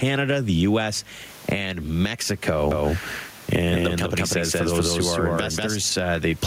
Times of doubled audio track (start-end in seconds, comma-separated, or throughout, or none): 2.71-5.77